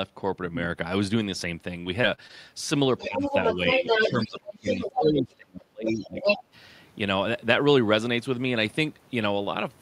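At 1.21 s and 1.33 s, a lost packet rebuilt from error correction: each 20 ms frame is replaced by a low-bitrate copy, so there is no gap, but the sound turns briefly rougher and noisier.

From 1.75 to 2.47 s, repeated packet loss produces a robotic sound. Several short holes, the longest about 23 ms, are each patched by extending the previous sound. Around a tenth of a second is concealed, about 11% of the span, giving choppy fragments.

From 2.98 to 4.99 s, a second voice comes through at roughly the same level as the main talker. This is likely the other side's voice leaking through, left behind by an echo canceller that did not fully remove the loudspeaker signal.

Between 3.01 and 3.35 s, the main talker dips by about 10 dB. This is likely speech suppressed in double talk, where the canceller attenuates everything while both sides are active.

From 3.75 to 6.43 s, the same suppression is much deeper, up to about 30 dB, across roughly two seconds. 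The talker's level drops, likely because the echo canceller is again clamping down during overlapping speech.

From 5.89 to 6.36 s, the other side's voice leaks through again, about 5 dB louder than the talker's speech. It is likely uncancelled loudspeaker echo picked up by the microphone.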